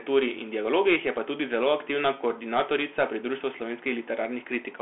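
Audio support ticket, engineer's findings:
Narrow, boxy speech throughout, band roughly 250 Hz to 3.4 kHz, nothing above 3.8 kHz. Scratchy s sounds, grainy hiss under speech, distortion on loud bright peaks. Bluetooth CVSD headset codec, consistent with 64 kbps: one-bit up/down delta stream, adaptive step lags fast rises, so it slope-overloads and adds granular noise.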